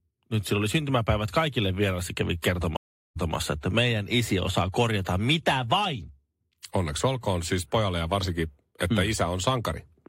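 Around 2.77 s, right after "syntymäpäivät kaikille vieraille kävi", there's a stream reconnect: about 0.39 s of dead air, then playback resumes roughly 0.19 s back, repeating a sliver before "että meidän isi osaa" by 3.34 s.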